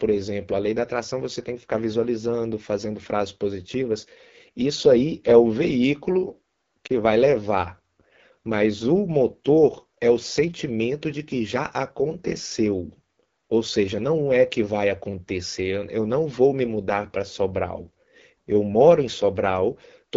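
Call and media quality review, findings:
AMR wideband (HD Voice) codec, whole clip: speech rough and raspy, band-limited near 7 kHz with a noise-filled top. Low-rate AMR-WB coding, consistent with 8.85 kbit/s. Distinct from packet loss: the roughness is constant, never dropping out.

Lost AMR speech frame, 6.88–6.91 s: brief dip or warble, then voice returns weak or rough for a moment. Decoder concealed it by repeating the last pitch and vocal tract settings at reduced gain, which fits one 20 ms frame. Unlike a dropout, there is no hard silence.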